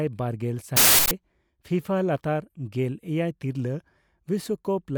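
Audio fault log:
0.77–1.11 s, uninitialised buffer: for about 341 ms the speech is replaced by a harsh burst of digital noise. A block of output was sent to playback before any audio had been written into it, so whatever stale data sat in that memory was read out as sample values. Those values bear no relation to the signal, so they come out as raw noise. The span fits a 16384-sample block.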